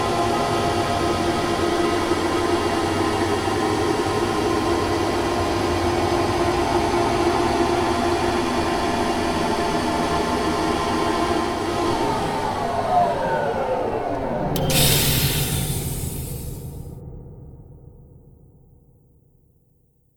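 From 4.07 to 6.12 s a train of clicks runs over the audio: about fifteen sharp, near-identical pulses at a steady 7.8 per second, heard as an even ticking that stands roughly 10 dB above the surrounding sound. The likely cause is an outside pulse source, such as interference from nearby equipment or a faulty connection or power supply. On a spectrogram each click appears as a thin vertical line spanning the full frequency range, evenly spaced; the waveform shows matching narrow spikes.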